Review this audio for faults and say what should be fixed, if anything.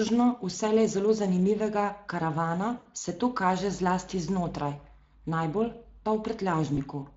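The speech is hoarse and grainy throughout. This is Speex codec damage, plainly audible. The CELP coder lacks the bits to model the excitation faithfully, which fits a setting near 20 kbps. To prevent it, encode at a higher Speex quality or switch to a modern codec such as Opus.

From 2.77 to 2.87 s, between "vselej zelo zanimivega karavana" and "se to kaže zlasti", the sound is stretched into a fading buzzy tone or coloured noise. It happens again, more briefly, from 6.75 to 6.81 s. This is VoIP packet loss concealed by the speech codec. The decoder stretched its last pitch and filter and lowered the gain across the gap. The first gap fits about four lost 20 ms frames and the second fits one. To prevent it, improve network reliability and add forward error correction or a larger jitter buffer.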